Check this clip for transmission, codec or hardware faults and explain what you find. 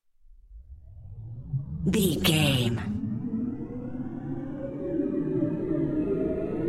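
One fault shows up, right at the start. From 0 to 2.02 s there's a time-stretched section: the pace runs about 1.48 times fast and rushed, yet pitch holds steady, likely from software dropping short slices to shorten it.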